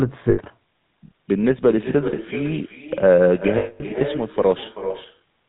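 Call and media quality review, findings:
Echo with no canceller, throughout: every phrase shadowed by a thinner copy around 0.4 s later, about 12 dB below the speech. Far-end loudspeaker feeding its microphone back into the call, with no echo cancellation removing it.

GSM full-rate codec damage, throughout: plainly audible buzzy, gravelly roughness on the speech, nothing above 4 kHz. Pulse-excited vocal-tract model discarding excitation detail; the sound points to GSM full rate at 13 kbps.

Lost GSM frames at 0.30–0.39 s (80 ms), 3.58–3.83 s (220 ms) and 5.18–5.22 s (40 ms): sound held as a rough, metallic ring. Missing frames concealed by repeating the last good frame at falling level.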